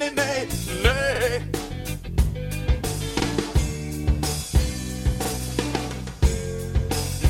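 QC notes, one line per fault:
1.16–1.20 s, 3.20–3.25 s and 5.25–5.30 s: overlapping chunks. The audio was processed in 2.0 s blocks, and each block began about 48 ms before the previous one had finished, so that sliver of sound plays twice at every join. The doubled segment produces a brief stutter or click, and because the block length is fixed, the glitch recurs on a steady two-second rhythm.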